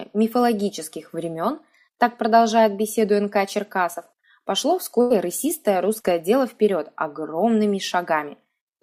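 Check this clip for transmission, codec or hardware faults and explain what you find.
Three transmission faults are audible, all of them lost audio data patched over by the receiver.

At 3.93 s and again from 6.00 to 6.06 s there is a brief smear, like a small wobble in the sound. This is short concealed packet loss. About 20 ms and then 40 ms of audio never arrived in time, and the decoder filled the holes by extending the preceding sound before blending back.

From 5.01 to 5.12 s the sound stalls into a held, fading tail, then jumps ahead. This is a burst of packet loss. Roughly 100 ms went missing, and the receiver stretched the last sound across about 93 ms while turning it down. That section of audio is simply gone.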